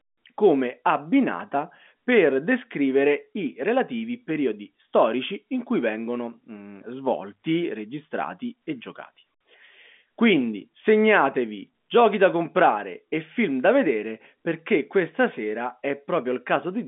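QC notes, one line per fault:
No faults heard; ordinary telephone-band speech throughout.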